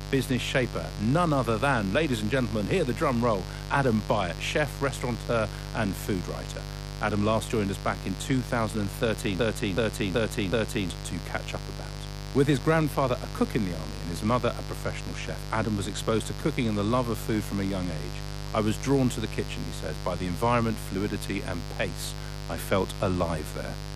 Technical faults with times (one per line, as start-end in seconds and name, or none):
0.00-23.95 mains buzz
9.39-10.90 broken-record loop